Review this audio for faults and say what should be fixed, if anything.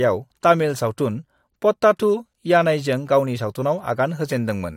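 No faults can be heard anywhere in this speech recording. Nothing needs to be fixed.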